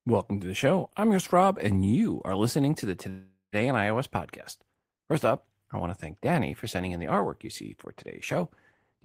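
Just after "are listening to the", from 3.09 to 3.55 s, a call audio freeze holds the last sound as a fading buzz that ends in about 120 ms of silence, likely from delayed packets draining the jitter buffer. Unlike packet loss, speech resumes exactly where it stopped, only 433 ms later.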